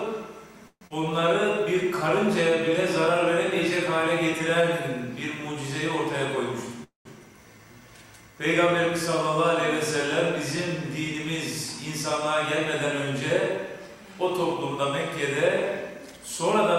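At 0.67 s the audio breaks up: the last sound is stretched into a fading buzz or hiss for roughly 0.23 s, the tail of that goes quiet for about 50 ms, and when things resume at 0.93 s around 120 ms of material simply isn't there. That's most likely a long network dropout, with the receiver covering the hole with concealment and then skipping the lost stretch. Right after, from 1.01 to 2.69 s, you get a jitter buffer slow-down. Playback drifts to about 98% speed at unchanged pitch, with sounds drawn out slightly as the receiver repeats small pitch-period chunks to rebuild its reserve, adding about 35 ms overall. At 6.84 s there's a different kind of hiccup. The sound smears into a decaying buzz or hiss, falls silent for about 140 ms, and then picks up at 7.08 s exactly where it left off, with nothing missing. That's likely a call audio freeze: packets stalled in transit, the buffer ran dry, and the 216 ms wait got inserted into the stream as extra delay rather than lost content. 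Finally, from 13.87 to 16.23 s, a jitter buffer speed-up kicks in. The audio runs about 5% fast at the same pitch and feels a bit hurried, because the receiver is trimming tiny pitch-period slices to shed the delay that built up earlier, cutting around a tenth of a second in total.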